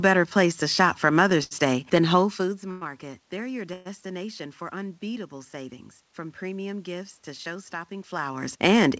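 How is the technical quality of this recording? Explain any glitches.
Three brief hold-ups interrupt the flow of this call recording, which carries nothing above 8 kHz, consistent with a 64 kbps G.722 call path.

At 1.44 to 1.53 s, a short stall from a late packet: the sound is stretched for about 72 ms with a faint buzz or dip, as the jitter buffer ran dry and then resumed.

At 2.71 to 2.83 s and 3.73 to 3.87 s, a call audio freeze: the sound smears into a fading buzz or hiss for 103 ms and then 120 ms, likely delayed packets emptying the buffer before playback picked up where it stopped.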